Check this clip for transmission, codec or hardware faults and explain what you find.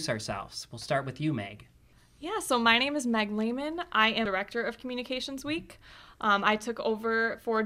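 Two faults of one kind are audible: compressed frames skipped, at 1.92 s and 4.25 s. At each point the speech jumps forward by roughly a fifth of a second, which suggests a run of about ten 24 ms frames that were missing or rejected by the decoder as damaged. The lost stretch of speech is simply absent.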